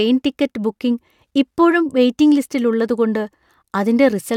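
A short speech recording with no technical faults audible anywhere in the signal.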